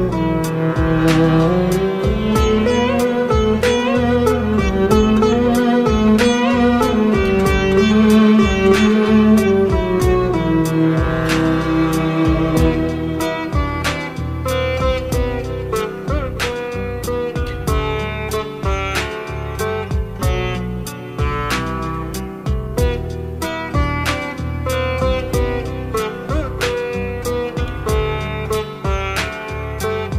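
No technical faults can be heard anywhere in this audio.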